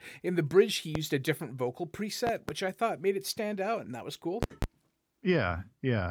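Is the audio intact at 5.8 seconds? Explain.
Yes, the speech at 5.8 seconds plays through intact, with no dropout, click, distortion or other fault audible at that point.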